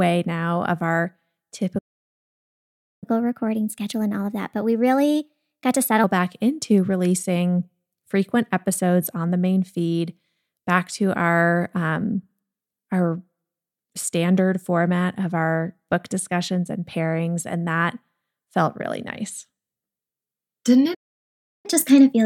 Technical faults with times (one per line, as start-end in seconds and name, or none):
1.78-3.04 playback stall
3.04-6.04 catch-up at higher speed
20.94-21.66 playback stall
21.66-22.25 catch-up at higher speed